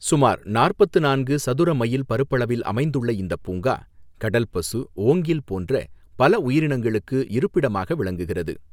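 Nothing in this speech recording stood out as a technical problem on listening.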